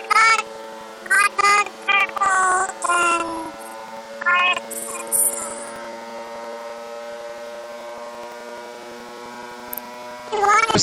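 Planar audio read as interleaved runs from start to finish. Each 85.33 ms block, which fits 4096 samples per channel, plays its left half then its right at double speed, so the sound sits an octave (12 semitones) high with a flutter at 11.7 Hz.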